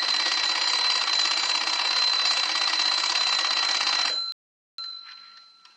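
At 4.32 s the playback buffer runs dry: the player has used up all the audio it had downloaded and has to halt until more data arrives, a rebuffering stall. The sound drops abruptly to silence and stays silent until 4.78 s, then picks up again exactly where it broke off, with nothing skipped or repeated. The only damage is the gap itself, which adds about 0.46 s to the running time.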